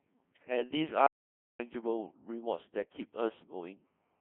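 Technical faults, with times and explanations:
Throughout: Codec 2 vocoder. The speech is rebuilt from a pitch value, a voicing decision, an energy level and a coarse spectral envelope at 1.6 kbit/s, inside a 150 Hz to 3.4 kHz line band, so the damage is heavy. Sine-wave synthesis replaces the original waveform, which gives the robotic, buzzy tone. Unlike the swirly smearing of a transform codec such as MP3, the voice here becomes a synthetic buzz rather than a blurred copy of the original.
1.07 to 1.59 s: Audio dropout to silence. For about 0.53 s the signal falls to silence, with no room tone and no decaying tail, then resumes abruptly. A natural pause would keep some background noise, and packet-loss concealment would fill the gap with stretched or repeated sound. This flat gap instead points to a likely loss of the input, such as a dropped link or brief mute, while silence went on being written.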